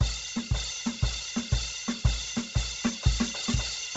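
From start to finish, the music sounds heavily squeezed. Nothing is heard above about 7.8 kHz. The top of the sound is dull, and what remains up there has a breathy, grainy texture. This is likely Bluetooth LC3 compression. The codec drops much of the upper spectrum at low bitrates and patches the gaps with shaped noise. The damage here fits a rate near 16 kbps with 10 ms frames.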